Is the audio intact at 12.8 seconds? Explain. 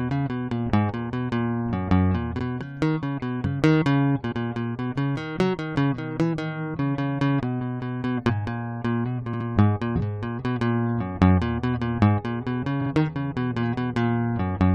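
No. Repeated frames occur from 12.81 to 12.90 s: a short stretch of the compressed music stream was written out more than once, so the decoder played the same 46.4 ms block again, twice over. That block length fits two compressed frames. The passage is heard as a quick stutter, the same sliver of music rattling back on itself, and the repetition adds about 93 ms to the clip's running time.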